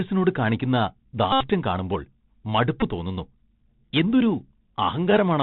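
From start to finish the speech runs through a Bluetooth CVSD headset codec. This narrowband scheme sends one bit per sample, up or down, with an adapting step size. Its damage is plainly audible here. Nothing above 4 kHz gets through, so the sound is dull and boxed in. Loud high sounds outrun the step and distort. S sounds turn scratchy. A grainy hiss sits beneath the speech. The texture fits a 64 kbps CVSD link.

At 1.32 s a Bluetooth headset packet repeat begins and lasts until 1.48 s. Packets from the headset went missing, and the chip decoded the previous packet again in their place. Each repeat recurs every 3.75 ms, so the run becomes a steady buzz near 267 Hz. The buzz stops when good packets return. It points to roughly 22 lost packets, about 82.5 ms of missing audio.

A second, shorter packet repeat follows from 2.81 to 2.84 s. The same recycling of old packet bits happens again, but the gap is brief. 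About 15 ms of audio is lost, which fits four missing packets. The result is a quick buzzy blip instead of a sustained drone.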